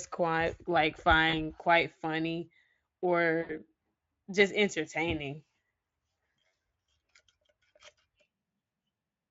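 VoIP packet loss concealed by the speech codec at 1.29 s just after "quite like", 3.41 s and 6.47 s: gaps of 40, 80 and 60 ms filled by extrapolating the last pitch and filter, heard as a fading buzzy smear over the otherwise faint-artefact Speex sound.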